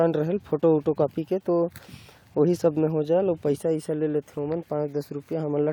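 From start to finish the speech carries a grainy, gritty edge that rises and falls with the sound itself, growing coarser as the level drops, while quiet stretches and decaying tails sputter or collapse toward silence. This is the signature of low bit depth without dither: the audio was likely rounded to about 9 bits with no dither, so the quantisation error tracks the waveform as distortion, sitting roughly 45 dB below the signal.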